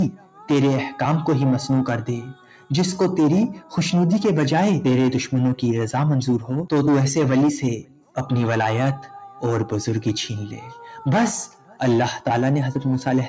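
All the way through, a speech-style noise suppressor is left running on the sound, treating steady parts as noise, so the level keeps wobbling by roughly 5 dB and held material pumps and thins while the audio tops out around 8 kHz from the call microphone processing. The suppressor cuts sound hardest at 0.11 to 0.45 s, 2.34 to 2.7 s, 7.79 to 8.17 s and 11.47 to 11.8 s. Each time it ducks a stretch of a few hundred milliseconds by about 11 to 12 dB, so sustained bits sag and tails get clipped short.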